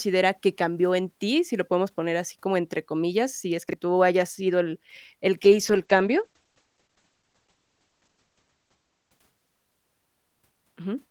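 Chunks out of order at 3.69 to 3.73 s, just after "entre comillas si es": a roughly 21 ms chunk plays one slot late, making a brief jumble.

Call bitrate drop from 5.42 to 10.69 s, beginning after "hayas sido el el": the audio turns watery and muffled, with the top end falling from 20 kHz to 8 kHz. This points to the encoder dropping from about 32 to 10 kbps and staying at its lowest for nearly 3 s.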